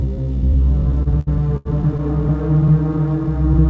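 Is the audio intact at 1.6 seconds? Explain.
No. From 0.92 to 2.01 s the audio suffers repeated stalls (stutter): packets arrived late, the jitter buffer kept running dry, and six gaps, the longest 86 ms, were filled by stretching the preceding sound. Unlike dropouts, nothing goes missing; the sound drags and hiccups instead.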